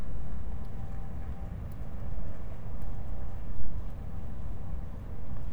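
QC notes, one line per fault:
Nothing stood out on a careful listen to this recording.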